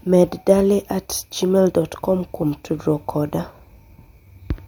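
No technical faults can be heard anywhere here.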